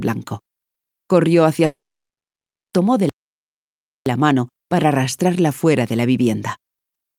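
At 1.65 s the sound breaks off. What follows is a long network dropout, most likely a run of packets that never arrived. The receiver stretches the last fragment into a brief fading buzz. After roughly a tenth of a second only silence remains. The gap runs to 2.75 s, about 1.1 s in all. When the audio returns, it has skipped ahead. That stretch is simply gone.

At 3.09 s the output stops again, in mid-flow. This one sounds like a playback stall. The player likely ran short of data, or its thread was held up. There is no fading tail this time. The sound just cuts to silence. The silence lasts until 4.06 s, close to one second. Then playback recovers and the audio continues.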